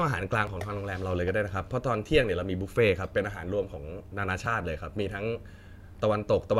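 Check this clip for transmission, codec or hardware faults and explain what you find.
Two brief discontinuities in the speech come from an overlap between stream segments, at 0.47 s and 4.46 s. They are spaced about 4 s apart, which fits a 4-second segment length. At each boundary the segment timestamps overlapped, so the player discarded the overlapping portion even though the sound had not actually been duplicated. About 5 ms and 16 ms of audio are lost, and the waveform jumps across the gap. Each one is heard as a short click or tiny skip.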